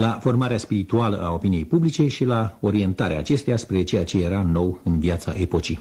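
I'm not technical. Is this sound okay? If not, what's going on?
Yes, nothing stood out as wrong when listening to this sound.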